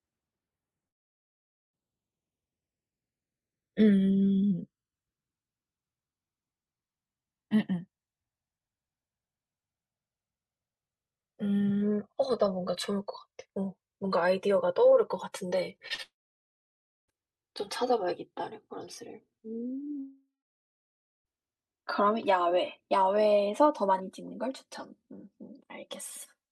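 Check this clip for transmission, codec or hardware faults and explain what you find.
Three kinds of transmission fault are present: a slow drift between the two channels throughout, a cluster of brief concealed packet losses, and two long gaps in the speech.

Channels drifting apart runs the whole clip. The two channels run on clocks that differ by something like 150 parts per million, so their offset creeps to a few milliseconds by the end. In mono this sweeps comb notches slowly, heard as slow flanging. Unlike a fixed phase problem, the colouring keeps moving.

Short concealed packet loss occurs at 15.77, 15.88 and 15.94 s, losing 20, 20 and 40 ms. The receiver bridged each hole by extending the preceding sound and blending back, giving quick smears or wobbles. Unlike a dropout, the speech carries straight on afterwards.

A long network dropout is the likely cause of the gaps at 16.02 to 17.14 s and 20.00 to 21.27 s, each losing over a second. 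The last sound continues briefly as a fading buzz or hiss, then nearly a second of silence follows before speech resumes with that stretch missing.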